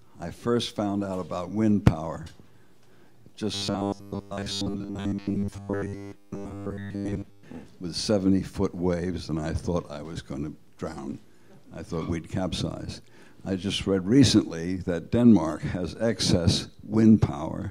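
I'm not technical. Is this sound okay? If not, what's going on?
No. From 3.54 to 7.43 seconds, new audio likely arrived too slowly, so the system kept repeating a tiny 10 ms slice to fill the gap, skipping most of the real sound. That robotic sound from repeated short buffers becomes a fixed, metallic 100 Hz buzz.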